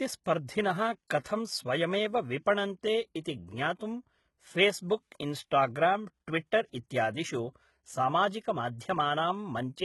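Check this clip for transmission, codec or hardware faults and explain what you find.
One codec fault runs through the whole speech clip: HE-AAC compression. The spectrum stops at 11.8 kHz, and the treble below that is rebuilt by copying lower bands upward, so its harmonics misalign and s sounds turn gritty and metallic. The heavy damage is likely from HE-AAC, and fits a bitrate near 16 kbps.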